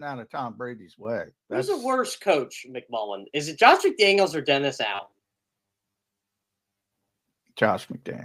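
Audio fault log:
1.05, 2.07 and 3.09 s: microphone volume stepped up. The input gain jumps about 9 dB, then about 3 dB twice, lifting speech and background together in sudden steps.
4.95 to 7.17 s: robotic sound from repeated short buffers. Speech turns into a stiff metallic buzz at 100 Hz, likely from a 10 ms chunk being looped while most of the real audio is skipped.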